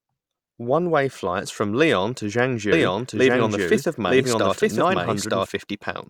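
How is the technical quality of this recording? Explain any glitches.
The recording has one clear fault. From 2.72 to 5.46 s, a doubled audio track appears: a second, equally loud copy of the speech trails by about one second and starts and stops abruptly. The likely cause is a slower second capture path or a misaligned edit.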